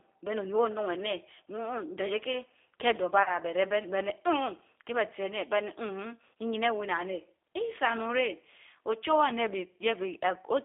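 A speech recording carried through the G.729 codec at 8 kbit/s. The band runs only from 300 Hz to 3.6 kHz, and the voice sounds plainly rough and synthetic. At 3.23 s, VoIP packet loss concealed by the speech codec appears. About 30 ms is missing, which fits one lost packet. The decoder stretches the last sound into a fading buzzy tone or coloured noise, and the voice stays weak until 3.36 s.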